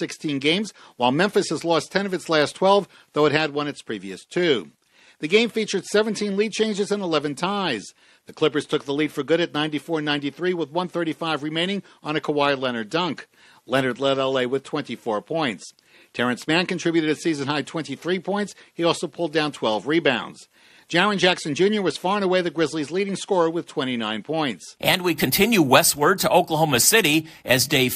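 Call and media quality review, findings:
No call or media quality faults found in this review.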